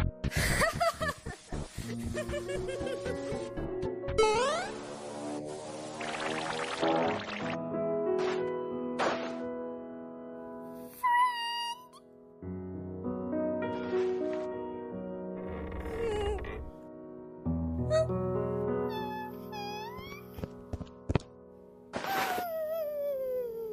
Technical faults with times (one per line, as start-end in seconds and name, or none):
none